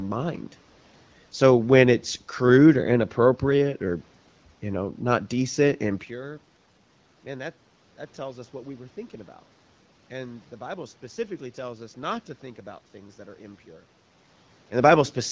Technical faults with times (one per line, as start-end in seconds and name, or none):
none